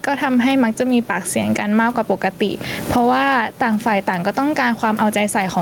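A speech clip with gain pumping throughout: the background swells in pauses and ducks under each loud syllable by around 10 dB. The likely cause is excessive gain with a fast limiter, leaving a flattened waveform envelope and a noise floor that visibly rises and falls between phrases on the spectrogram. That floor is ordinary room noise sitting about 32 dB below the speech.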